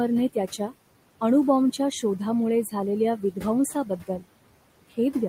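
From start to end, the speech carries noise suppressor artifacts. The suppressor pulls bands it judges to be steady noise down by about 18 dB, frame by frame. The room noise, about 17 dB below the speech, drops away between phrases and rises under them.

From 3.85 to 4.24 s, the speech is cut by the noise suppressor. It mistook some quiet speech for noise. In total, only a brief stretch of this window is affected. There, the gain drops by up to about 16 dB. Those sounds come out swallowed and faint.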